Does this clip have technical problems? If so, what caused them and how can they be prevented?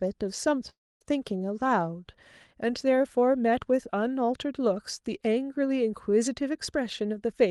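Yes. From 0.69 s to 1.03 s the speech turns into a fading buzz, falls to about a quarter-second of silence, then resumes with roughly 320 ms missing. This is likely a long network dropout: packets stopped arriving, and the receiver extended the last sound before giving up. A steadier connection, such as a wired link instead of congested Wi-Fi, with forward error correction enabled, would prevent it.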